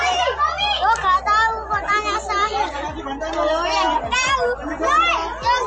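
No technical faults can be heard anywhere in the clip. Nothing in the audio stands out as a problem worth noting.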